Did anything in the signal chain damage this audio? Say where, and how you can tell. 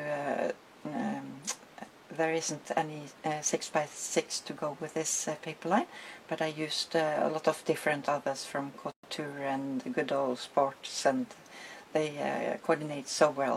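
Yes. The damage is at the codec stage, where separately encoded pieces were joined without trimming. At 8.92 s the continuous sound drops into silence for about 119 ms, resuming at 9.03 s exactly where it left off. That is a gap at a join of encoded pieces: the padded final frame of one piece and the start-up delay of the next both remain, and their edges come through smeared by the codec.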